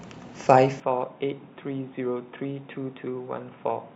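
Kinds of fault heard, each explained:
Input switched to a poorer device: At 0.8 s the speech suddenly turns dull and about 10 dB quieter. Nothing passes above 3.8 kHz. A faint new noise floor sits far below the speech. No gap marks the change, likely a switch to a narrower-band microphone.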